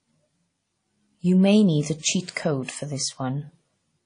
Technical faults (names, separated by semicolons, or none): WMA compression; pre-echo